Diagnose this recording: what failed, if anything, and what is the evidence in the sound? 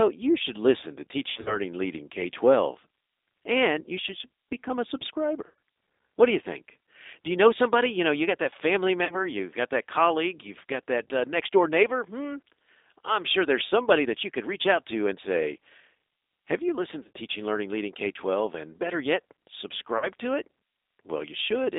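Codec stage: the G.729 codec at 8 kbit/s makes the speech rough and synthetic. A spectrogram shows energy only between 300 Hz and 3.7 kHz, with nothing above.

Network stage: VoIP packet loss concealed by the speech codec at 1.30, 5.47, 9.05, 17.03 and 19.98 s. Each gap of 40–110 ms becomes a fading buzzy tone or coloured noise, seen as smeared, decaying energy.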